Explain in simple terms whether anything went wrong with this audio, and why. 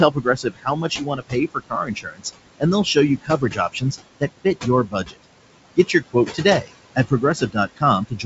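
A noise suppressor is fighting the room noise here, leaving noise suppressor artifacts: the background drops heavily between phrases.

It also causes speech cut by the noise suppressor, where quiet bits of speech get mistaken for noise and pushed down, so they sound swallowed, at 0.1 to 2.26 s, 3.17 to 3.93 s, 4.2 to 4.66 s, 4.85 to 5.25 s, 5.76 to 6.45 s, 6.61 to 6.71 s, 6.96 to 7.83 s and from 8.07 s to the end.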